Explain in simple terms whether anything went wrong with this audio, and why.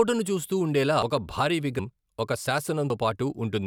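The speech skips ahead three times: at 1.02 s between "చూస్తూ ఉండేలా" and "ఒక భారీ", at 1.79 s just after "ఒక భారీ", and at 2.90 s. Each jump likely comes from a dropped buffer (overrun). Audio wasn't collected in time, so pieces of roughly a tenth to a third of a second vanished.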